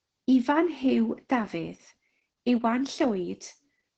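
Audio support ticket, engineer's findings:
Opus voice compression, heavy, whole clip (0 to 4 s). Muffled, hoarse, faintly robotic speech. Probable component: Opus encoder in SILK mode at wideband, starved of bits, which fits roughly 10 kbps. Linear-prediction coder quantises excitation coarsely, so harmonics blur. Spectrogram: hard ceiling near 8 kHz, nothing above; smeared harmonic stripes, grainy fill between them, texture changing in steps that fit 20 ms frames. Waveform looks normal in outline.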